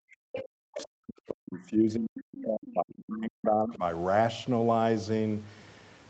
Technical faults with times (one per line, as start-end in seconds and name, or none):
0.00-3.83 speech suppressed in double talk
0.36-0.41 other side's voice leaking through
0.77-0.83 other side's voice leaking through
2.69-2.73 other side's voice leaking through